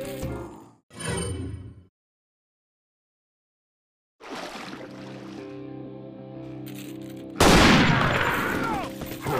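No technical faults can be heard anywhere in this audio.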